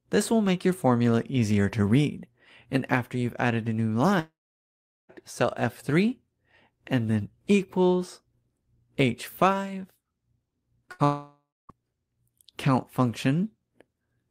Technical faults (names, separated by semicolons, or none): long network dropout; short concealed packet loss; burst of packet loss